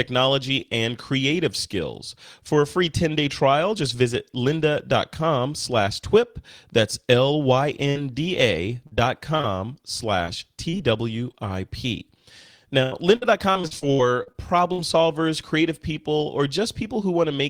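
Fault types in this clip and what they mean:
Burst of packet loss, 7.89 to 7.97 s: a short run of audio data never arrived in time to be played, so the receiver stretched the last sound it had across the hole, about 57 ms of it, and faded it out. When the speech picks up again, about 60 ms of the original has been skipped over, leaving a brief smeared patch followed by a small jump forward.
Repeated packet loss (robotic sound), 8.87 to 9.45 s, 10.25 to 11.35 s and 12.83 to 14.80 s: data dropped out again and again, and each hole was patched by extending the preceding sound, which makes the speech choppy with fragments lost. The first stretch has four gaps, the longest 44 ms. The second has four milder ones. The third is worst, with ten gaps up to 84 ms, ending just before "solvers creative people or".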